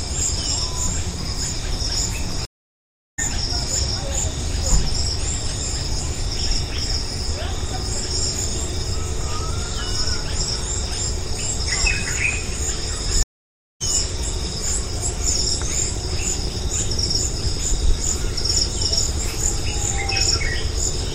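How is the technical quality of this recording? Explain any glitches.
The quality is disrupted by two stream reconnects. At 2.45 to 3.19 s there is 728 ms of silence, and at 13.23 to 13.82 s there are 577 ms. Each time the connection dropped and a fresh decoder restarted mid-stream, so the audio fades back in at a later point, skipping about 0.7 s and about 0.3 s respectively. On a waveform or spectrogram each shows as a blank gap followed by a discontinuous jump in the material.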